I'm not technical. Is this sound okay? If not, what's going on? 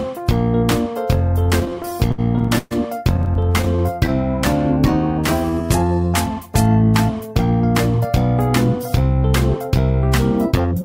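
No. From 1.43 to 2.73 s and again from 3.17 to 4.10 s the sound catches and drags in quick little hitches. These are repeated stalls (stutter): audio data arrived late, so the player briefly stretched the last sound while waiting.

From 4.88 to 6.01 s it plays slightly slow, at about 91% speed with the same pitch. This is a jitter buffer slow-down: the player repeated tiny slices to rebuild its reserve.

From 10.60 to 10.83 s it briefly rushes, at about 115% speed. This is a jitter buffer speed-up: the player trimmed tiny slices, about a twentieth of a second in total, to catch up.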